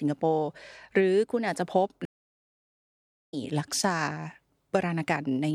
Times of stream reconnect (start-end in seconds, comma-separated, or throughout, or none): 2.05-3.34